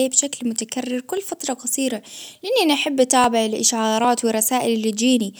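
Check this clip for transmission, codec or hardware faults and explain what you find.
Four short skips break the speech at 1.17, 2.40, 3.24 and 4.05 s, each a tiny jump forward with no gap of silence. The likely cause is a dropped buffer (overrun): the recording side fell behind, the hardware overwrote a few milliseconds of samples, and the surviving audio on either side was butted together. On the waveform each appears as an abrupt step discontinuity; on a spectrogram, a thin vertical broadband line.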